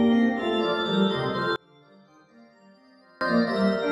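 From 1.56 s to 3.21 s the level falls by about 30 dB and what remains is a faint copy, then returns at full body. The likely cause is one channel inverted: with one side's polarity reversed, everything common to both channels cancels when they are summed, leaving only their faint difference. Unlike a dropout or gain dip, the sound never vanishes entirely, and the centre disappears.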